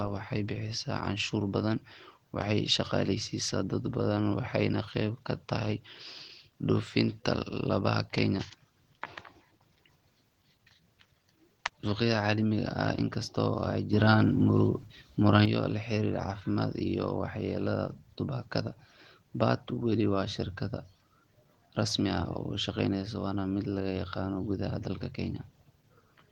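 Throughout the speech the sound is plainly hoarse and slightly robotic, with coarse texture. This is Opus voice compression at a low bitrate, consistent with about 16 kbps in hybrid mode, where linear-prediction coding is topped by a thinner high band.

From 13.93 s to 15.45 s, speech and background noise jump together by about 6 dB and then drop back. This is a sudden gain jump, likely a digital gain change applied without any ramp.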